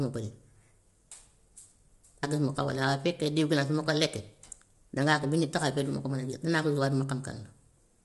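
Speech runs throughout with plainly audible coding damage. The voice sounds rough and grainy, with noise filling the gaps between harmonics. Nothing is present above 11.6 kHz. The likely cause is low-delay AAC compression (AAC-ELD), whose short frames blur pitch detail at a bitrate of around 32 kbps.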